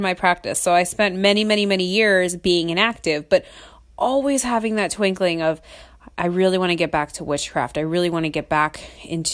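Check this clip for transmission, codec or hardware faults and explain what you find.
No faults can be heard anywhere in this speech recording. There is nothing to report from any stage between capture and playback.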